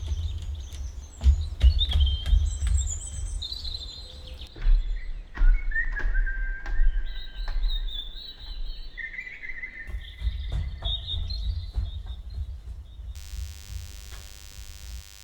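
A thin, steady buzz appears at 13.15 s and continues to the end of the clip, sitting roughly 20 dB below the other sounds. It has a 100 Hz fundamental topped by a dense stack of harmonics, which gives it its edgy, wiry quality. This is DECT cordless phone buzz: a nearby handset or base station transmits short radio bursts every 10 ms, and the audio circuitry rectifies them into an audible 100 Hz pulse train.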